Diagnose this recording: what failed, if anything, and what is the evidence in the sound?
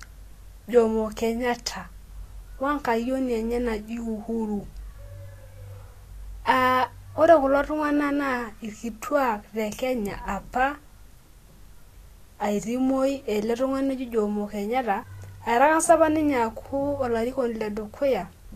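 Codec stage, likely Vorbis compression: nothing above 14.2 kHz, and coarsely quantised treble turns to grainy hiss throughout the speech, pointing to a low bitrate near 35 kbps.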